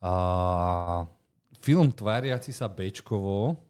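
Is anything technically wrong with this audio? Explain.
Yes, there's one fault. From 0.75 to 0.89 s there's a call audio freeze: the last sound smears into a fading buzz for about 115 ms, likely from a drained jitter buffer, then resumes with nothing lost, just delayed.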